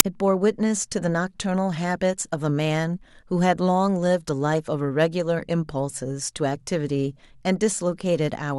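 File tags played as audio at 0.0 s: an embedded cover picture's compressed data is decoded as samples, giving a very brief, hard-edged burst of very loud white noise.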